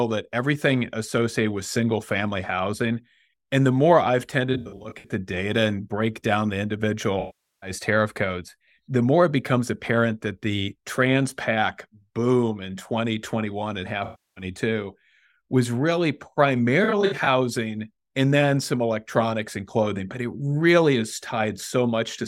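AAC frame loss with concealment: the decoder lost audio frames and rebuilt each gap from the last good spectrum. At 4.53 s, after "and the more I've", and at 16.84 s, short scattered losses leave smeared, phasey patches. At 7.20 s, after "break down the individual", and at 14.04 s, losses of 0.43 s and 0.32 s sound noisy and washed out.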